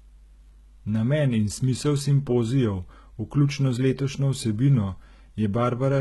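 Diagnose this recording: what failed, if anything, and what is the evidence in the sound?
HE-AAC compression, heard throughout the speech. The likely cause is a low-bitrate spectral band replication codec at the codec stage. Nothing survives above about 11.8 kHz, and the treble below that cutoff sounds synthetic: the s sounds come out gritty and lispy, with a metallic sheen. The upper band is rebuilt by copying lower bands upward under a coarse envelope, so its harmonics do not line up with those beneath the crossover. The heavy damage points to a bitrate around 16 kbps.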